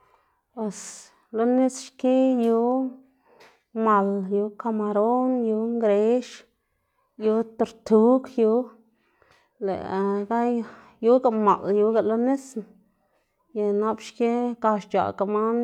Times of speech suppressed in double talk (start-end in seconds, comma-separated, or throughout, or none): none